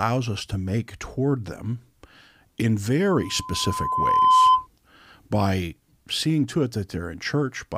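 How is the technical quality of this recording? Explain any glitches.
The recording has one clear fault, a burst of loudspeaker feedback squeal partway through the speech.

From 3.15 s to 4.67 s, a steady 1 kHz tone rises out of the speech, swelling over roughly a second until it sits about 10 dB above the talker. The microphone is picking up the loudspeaker it feeds, and at 1 kHz the round-trip gain exceeds unity, so that single frequency keeps reinforcing itself into a piercing squeal until the amplifier limits it or the loop is broken.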